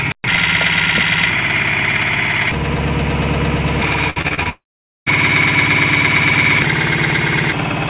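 From 4.1 to 4.47 s the sound turns choppy, the sign of repeated packet loss (robotic sound). Five short holes fall in this stretch, the longest 56 ms, and each is filled by repeating the last bit of audio, so about 41% of the span is patched. On a spectrogram this shows as smeared, horizontally stretched copies of the previous frame alternating with real content. The waveform shows repeated, near-identical cycles at each patch.

Almost immediately after, from 4.49 to 5.08 s, the audio briefly continues as a fading buzz, then goes quiet for about 470 ms before resuming with that portion simply gone. This is most likely a long network dropout: nothing arrived, the receiver stretched the last sound for roughly a tenth of a second, then gave up. On a waveform the amplitude tapers into a flat line. A spectrogram shows a short blurred tail and then an empty band of near-silence. Throughout, the call path's narrowband coding leaves nothing above 4 kHz, which fits a standard telephone-quality codec.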